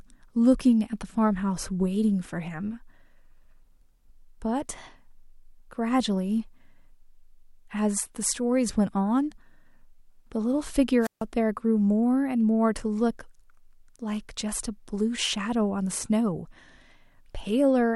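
At 11.01 s a wireless microphone squelch dropout interrupts the speech. The radio link weakens, hiss swells briefly, then the receiver's squelch mutes the output for about 147 ms before sound returns at 11.24 s. That preceding static rise distinguishes it from a digital packet loss gap.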